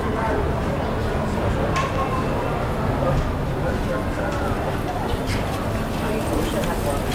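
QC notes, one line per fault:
No technical faults heard anywhere in the sound.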